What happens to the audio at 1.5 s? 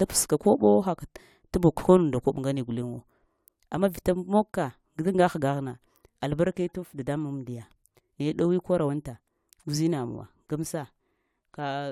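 Nothing goes wrong at 1.5 s; the speech carries on intact through that moment.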